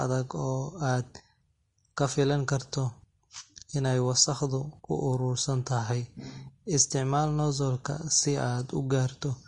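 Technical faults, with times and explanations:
Throughout, Vorbis compression: the speech has likely passed through a low-bitrate Vorbis encoder, around 32 kbps by the sound of it. The encoder discards everything above 10.6 kHz and coarsely quantises the remaining treble, so sibilants turn hissy and grainy and consonant onsets blur.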